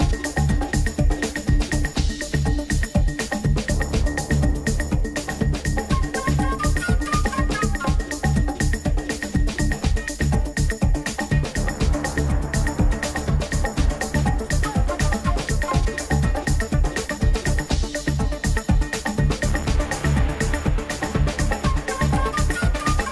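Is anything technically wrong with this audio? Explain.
Yes. From 4.5 to 7.1 s, the resampler restarted on every block. Each 100 ms block was converted separately, leaving edge errors heard as ticks at 10 Hz, in a 48 kHz to 24 kHz conversion.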